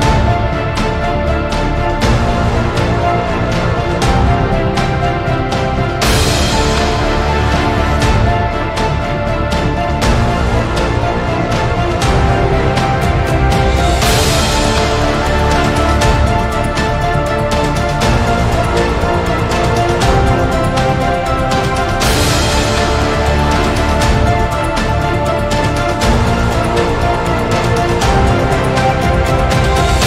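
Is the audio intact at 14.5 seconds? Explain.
Yes, the audio at 14.5 seconds is intact, with no dropout, click, distortion or other fault at that moment.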